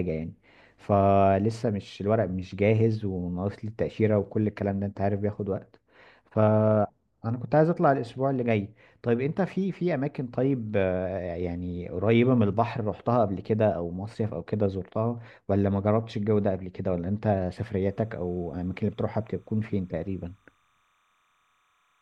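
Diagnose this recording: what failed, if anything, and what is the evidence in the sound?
Timecode bleed in the analogue wiring: from 17.81 s to the end at 22.02 s, a faint chirping warble sits far below the speech, flipping between tones near 1 and 2 kHz. The pattern fits 30 fps linear timecode leaking from an adjacent track or cable.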